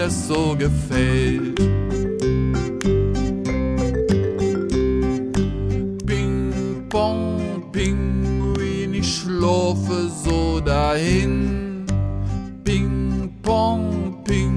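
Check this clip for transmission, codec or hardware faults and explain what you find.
No faults detected here.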